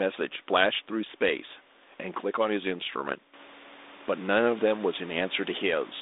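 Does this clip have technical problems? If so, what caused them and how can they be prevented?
No technical problems: the speech carries a telephone-band codec's light coloration and room noise that rises by about 14 dB around 3.5 s while staying well below the speech, neither of which is a system fault, so nothing needs preventing.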